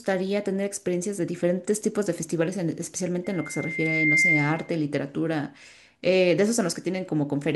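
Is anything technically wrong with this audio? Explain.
Yes. The speech carries a loudspeaker feedback squeal from 3.24 s to 4.75 s. A microphone is picking up the loudspeaker it feeds, and at 2.1 kHz the loop gain exceeds unity, so that frequency reinforces itself on every pass. The result is a single steady tone that swells over roughly a second until it sits a few decibels above the speech. It then continues until it stops at 4.75 s.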